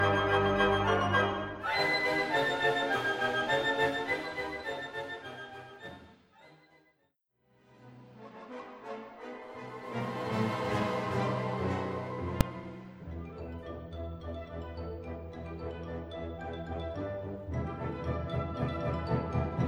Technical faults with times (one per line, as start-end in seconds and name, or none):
12.41 invalid numbers at full scale